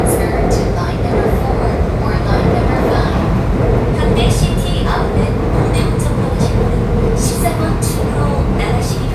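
Nothing in these sounds stood out as a technical problem on listening.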